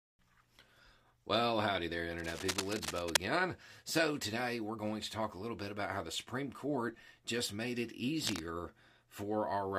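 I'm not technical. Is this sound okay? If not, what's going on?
No, there are two short bursts of cable scratch noise. The first runs from about 2.18 to 3.17 s, right after "howdy there", and it's roughly as loud as the speech. The second is brief, 8.25 to 8.40 s, after "just made it", and a bit quieter. Both sound like scratchy rustling on top of the audio. It's likely a worn cable or plug being moved, so the connection flickers.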